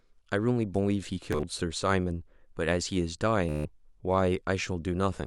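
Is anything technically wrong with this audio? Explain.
Yes. Bluetooth stutter appears twice in this speech, at 1.33–1.43 s and 3.49–3.65 s. Wireless packets arrived late or not at all, so the receiver replayed its last short buffer. About 80 ms was lost in scattered bursts, the longest lasting 40 ms, and then 160 ms. Each gap becomes a buzzy, machine-gun repeat of a tiny slice before the speech jumps ahead.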